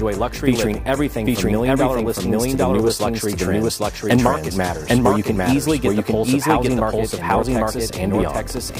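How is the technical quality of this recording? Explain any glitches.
The recording has one fault, present from start to finish. Doubled audio track, throughout: a second full-band copy trails the original by roughly 0.7 s at about the same level, likely from the sound being captured twice along paths of different speed. It sounds like a dry, even echo with no room colour.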